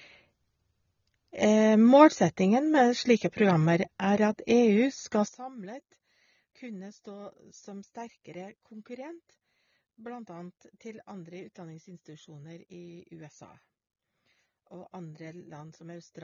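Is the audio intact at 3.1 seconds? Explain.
No, at 3.1 seconds the speech carries AAC compression damage, as it does through the whole clip, likely from AAC-LC coding at a low bitrate, with a sound that fits about 24 kbps. To save bits, the encoder drops content it judges inaudible and lowers the bandwidth, so nothing remains above 6.9 kHz. The speech therefore sounds dull and muffled, and sibilants and sustained sounds take on a smeared, warbling, fizzy texture.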